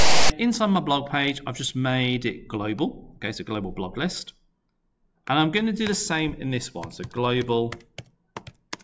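A loud, hard-edged rasp sits off to one side from 0.00 to 0.30 s: file tags played as audio, where text metadata is decoded as samples.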